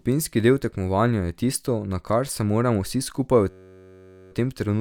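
Speech, with a system hang loop from 3.50 to 4.32 s, after "moramo vsi skupaj v": one 10.67 ms slice, fitting a 512-sample buffer, repeats exactly, giving a steady 93.8 Hz buzz rather than a varied stutter, before "v tem".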